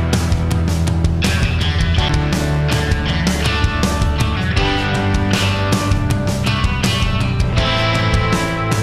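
At 2.09 s a CD skip occurs. The laser jumps to another turn of the spiral, giving a tick, a brief mute of a few milliseconds, and a jump in the sound.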